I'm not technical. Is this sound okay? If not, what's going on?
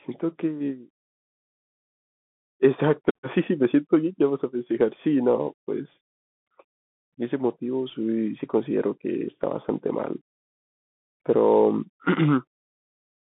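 No. The whole clip went through a Bluetooth CVSD headset codec, the old phone-quality link headsets use. Nothing above about 3.8 kHz survives, so the speech sounds thin and muffled. S sounds turn scratchy, and a grainy hiss sits underneath.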